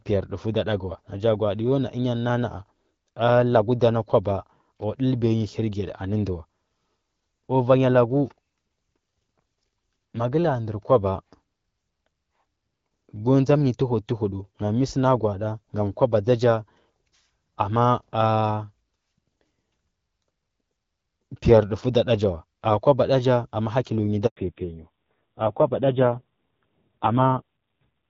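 At 24.26 s the call was passed from one network to another, a handover gap, and no speech frames arrived while the link switched over. The speech collapses almost instantly and stays silent for 100 ms, until 24.36 s, when the new connection begins carrying audio again. Whatever was spoken inside that window is simply gone rather than muffled, so the break reads as a clean hole in the sentence.

From 24.36 s to the end, the call fell back to narrowband: the new link no longer carried HD Voice and the speech is coded by an older, much leaner scheme. Before this point, light wideband coding damage can be heard, which fits AMR-WB at about 12.65 kbit/s. Afterwards nothing survives above 4 kHz, so the speech loses its crisp consonants and air and turns dull and rough. The added coarseness fits a low narrowband rate near 5.9 kbit/s.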